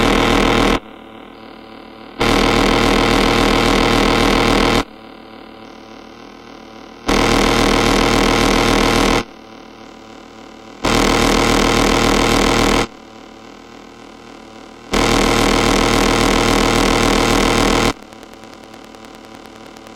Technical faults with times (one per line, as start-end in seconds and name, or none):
16.49-19.88 train of clicks